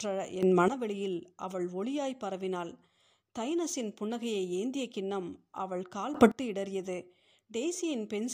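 Speech with two sudden gain jumps. The level, background noise included, leaps up about 12 dB from 0.43 to 0.68 s and about 18 dB from 6.14 to 6.32 s. These appear as square-edged steps in the waveform envelope and as sharply bounded brighter blocks on a spectrogram, likely from gain changes applied without a ramp.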